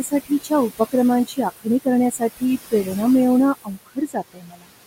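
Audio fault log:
throughout, noise suppressor artifacts: room noise about 12 dB below speech drops by about 17 dB in pauses and returns under speech.
0.03–0.51 s, 1.26–1.67 s, 2.11–2.43 s, 3.54–4.71 s, speech cut by the noise suppressor: the suppressor treats quiet speech as noise and turns it down by about 15 to 22 dB, so parts of the speech itself sound swallowed rather than the background fluttering. The last span is the worst, with well over half a second faded.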